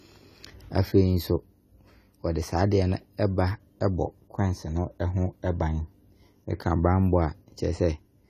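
From start to finish the speech carries AAC compression damage that is plainly audible. The top end stops at 14 kHz, and sibilants and sustained vowels have a smeared, warbling, fizzy texture. The likely cause is low-bitrate AAC-LC coding, consistent with roughly 32 kbps. At that rate the encoder discards high frequencies and quantises the remaining bands coarsely, leaving gaps and substitute noise that blur detail.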